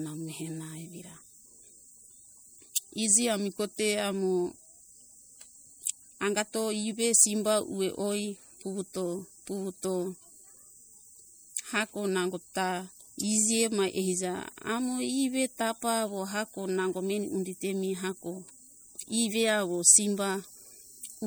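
All the way through, the speech has a watery, swirly edge from what's likely MP3 compression, fitting roughly 64 kbps, with weak detail flickering frame to frame.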